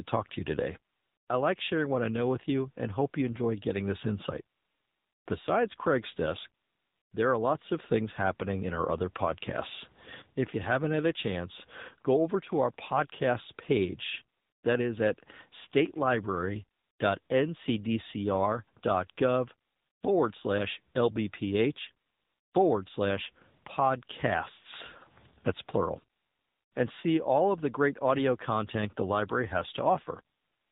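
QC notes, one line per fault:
throughout, AMR narrowband mobile codec: the speech sounds boxed-in and phone-like, with nothing above 4 kHz, which points to 8 kHz sampling. Voiced sounds carry a plainly audible buzzy, synthetic edge. The codec rebuilds each 20 ms frame from a vocal-tract filter excited by a handful of pulses, so fine detail is lost. The degree of damage fits one of AMR-NB's mid-rate modes, around 8 kbps.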